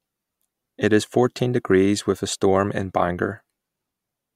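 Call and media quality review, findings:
No audible defects found on this speech recording; nothing to raise against any component.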